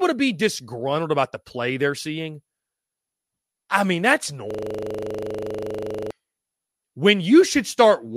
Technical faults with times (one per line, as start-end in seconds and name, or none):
4.51-6.11 system hang loop